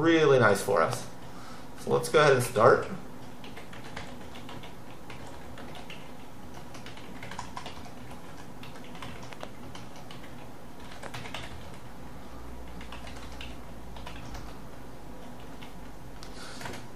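A loud pop lands at 0.93–0.95 s, roughly 20 dB above the sound, then a double pop at 9.33–9.45 s and a single at 11.06–11.08 s, each about 10 dB up. Likely a voltage spike from a switch, plug or static, with the sound running on underneath.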